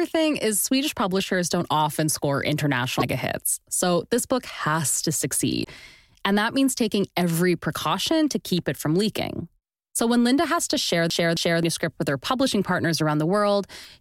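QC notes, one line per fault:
2.97–3.02 s, 5.61–5.66 s, 13.81–13.87 s: damaged data in a compressed stream. Each event is a short chirp or blip of roughly 50 to 60 ms that breaks into the speech. Corrupted bytes in the encoded stream cause the decoder to misread or discard those frames, lose sync and scan forward for the next valid frame header. The garbled output and the resync produce the brief squawk.
11.10–11.63 s: CD stuck on one turn. A segment of about 0.27 s (266 ms) plays twice in succession, with a short mute at each jump back. This is the even, mechanical stutter of a disc that throws the laser back one track at the same point on each revolution. The fixed loop length matches one rotation at that radius, and the repeated speech is heard as a brief skipping-CD stammer.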